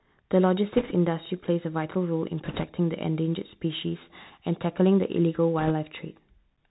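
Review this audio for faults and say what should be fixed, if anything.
The speech sounds muffled and grainy throughout, with a fine hiss under it, scratchy s sounds, and harsh edges on loud high sounds. This is the Bluetooth CVSD headset codec, which fits a 64 kbps link. It cuts everything above 4 kHz, and its one-bit up-or-down steps can't keep pace with fast, loud changes.

Short bursts of rushing, crackly noise, with no sharp clicks, come from bit errors on a Bluetooth voice link at 0.72–0.93 s, 2.45–2.64 s and 5.59–5.71 s. Flipped bits each nudge the waveform only slightly, and their effects fade quickly. The burst around 2.5 s is roughest, fitting an error rate of a few percent.

To prevent both, record through a wideband path such as mSBC or a wired microphone, and keep the headset close to the receiver with less radio interference.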